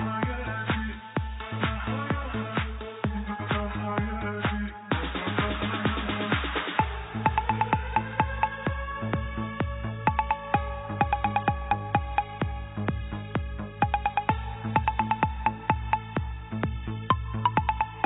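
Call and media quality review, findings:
No faults found in this recording; nothing to flag for follow-up.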